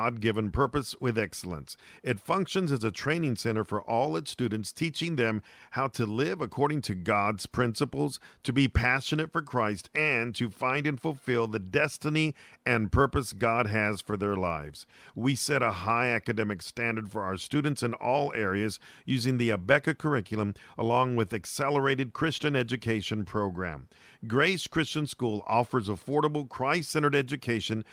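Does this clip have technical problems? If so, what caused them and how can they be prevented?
Yes, there are scattered short gaps in this speech between 13.39 and 14.72 s: about seven tiny dropouts, none much over 15 ms, where lost or late packets got patched by stretching the last sound, leaving little ticks and smears. A bigger jitter buffer or packet redundancy (FEC) would prevent it.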